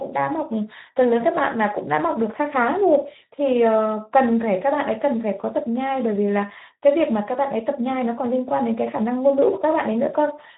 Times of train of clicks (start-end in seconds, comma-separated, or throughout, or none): none